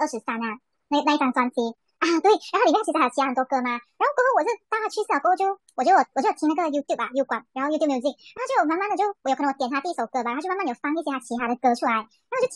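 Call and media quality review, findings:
Speech high and hurried throughout, 1.38x speed, pitch up about 5.5 semitones. Wrong sample rate: samples played unconverted on a faster clock, ratio fitting 32 kHz material read at 44.1 kHz. Probable component: playback or resampler stage.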